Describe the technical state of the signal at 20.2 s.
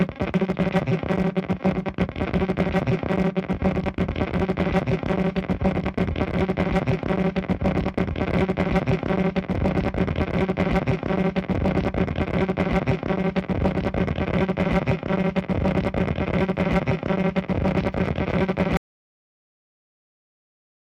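At 20.2 s the signal is in an audio dropout to silence that begins at 18.77 s and runs to the end of the clip. The sound stops abruptly and what follows is silence, with no room tone or noise floor at all, most likely because the input was lost while recording continued. That complete, sudden emptiness separates it from a fade-out or a noise gate, which leave a taper or some residual hiss.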